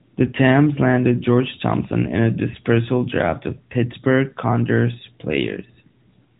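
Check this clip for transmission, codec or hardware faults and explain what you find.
Nothing stood out on listening to this speech recording.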